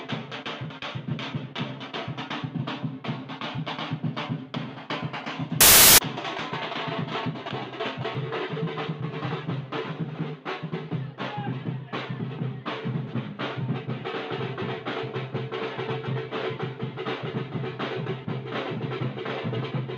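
For a short stretch from 5.61 to 5.98 s, the reader assembled each sample from the wrong bytes, whether shifted by one byte, taken in swapped order or read with the wrong alignment. The rapidly fluctuating low-order bits end up as the dominant part of every value, so for those 0.37 s the audio is replaced by loud, harsh broadband noise.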